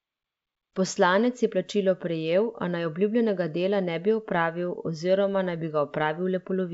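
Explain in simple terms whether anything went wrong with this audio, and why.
Nothing went wrong: the speech passes through G.722 wideband telephone coding working as designed, with at most a faint trace of that coding in the upper range.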